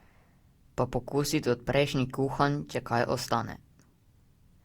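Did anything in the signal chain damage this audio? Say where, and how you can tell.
Yes, at the codec stage. Throughout the speech there is generation loss: the sound is swirly and hollow, consonant attacks are smeared, and the texture is rougher than a single 64 kbit/s Opus-like encode would leave, though the band still reaches about 20.2 kHz. That pattern most likely comes from several successive lossy encode and decode passes, roughly five. Each pass requantises on a shifted frame grid, so the noise stacks up.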